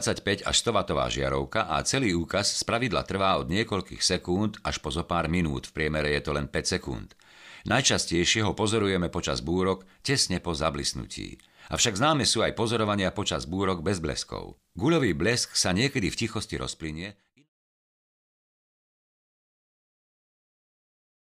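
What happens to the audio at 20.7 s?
Nothing goes wrong at 20.7 s; the audio is intact at that point.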